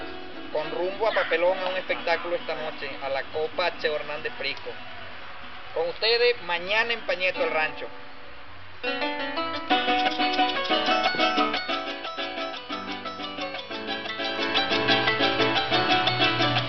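Gain was changed in unsmoothed steps about fifty times a second, causing zipper noise: a fine ticking as the level drops roughly 10 dB from 11.48 to 11.90 s, then rises roughly 10 dB in 1 dB steps from 14.21 to 14.59 s.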